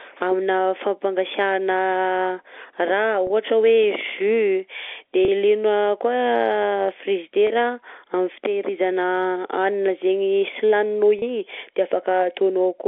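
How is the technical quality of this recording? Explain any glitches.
One glitch stands out near the end, heard through the narrow telephone band of G.711 telephone coding, roughly 300 Hz to 3.5 kHz. From 11.19 to 11.22 s, one packet was lost on the line, about 30 ms of audio, and the receiver concealed the gap by repeating the last pitch period. This packet loss with pitch repetition sounds like a brief held, slightly buzzy sustain before the speech resumes.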